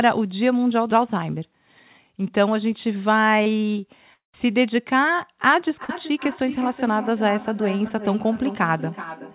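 A speech recording carried over a narrowband call path, with nothing above 4 kHz, which fits a telephone-grade codec. It shows three kinds of fault. The first is short concealed packet loss at 3.43–3.47 s, 5.84–5.90 s and 7.89–7.91 s, where roughly 30 ms, 40 ms and 10 ms of audio never arrived. The receiver patched each gap by extending the preceding sound, so you hear a brief smear or wobble. On a spectrogram each patch appears as a short stretch of smoothed, repeated harmonics or flat noise, with a slight discontinuity where real audio resumes.

The second is a long network dropout at 4.14–4.34 s, likely caused by an interruption in packet delivery lasting about 200 ms. The last sound is stretched into a fading buzz, then about 130 ms of silence follows before the speech picks up again further along, with the intervening part gone. The waveform shows a decaying tail collapsing to a flat line.

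The third is feedback echo between two devices, running from 5.65 s to the end. Every utterance returns at an interval of roughly four tenths of a second, thinner and more metallic each pass, peaking about 12 dB below the direct speech. This happens because a second device in the room replays the call into a microphone whose echo canceller cannot remove it. A spectrogram shows evenly spaced copies of each syllable trailing behind it.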